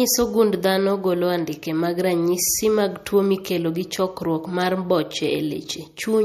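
Throughout, the speech was likely squeezed through MP3 compression at a low bitrate, around 48 kbps, leaving nothing above 13.9 kHz and a plainly watery, swirly sound with metallic chirps on s sounds.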